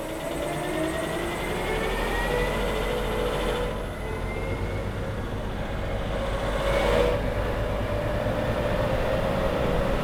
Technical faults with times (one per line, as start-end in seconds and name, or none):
6.52 repeated buffer